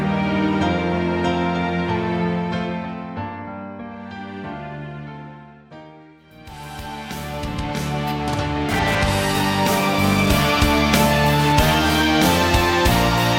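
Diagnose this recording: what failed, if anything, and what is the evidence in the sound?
A GSM phone buzz enters in the analogue stage from 8.69 s to 12.02 s: a hard, raspy buzz at a repetition rate of about 217 Hz, sitting only about 7 dB below the wanted audio and bearing no relation to it. A nearby 2G handset transmitting in bursts induces RF that unshielded wiring or an input stage rectifies into a pulse train. Because it appears and drops away rather than holding steady, it points to a data transfer. A spectrogram shows a dense comb of harmonics spaced 217 Hz apart, and the waveform shows rectangular pulse trains.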